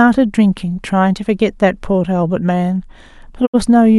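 Short speech clip with a digital broadcast dropout near the end. At 3.45 s the sound fades out over 20 ms and stays muted until 3.56 s, which fits the receiver rejecting a couple of frames. About 64 ms of programme is simply gone.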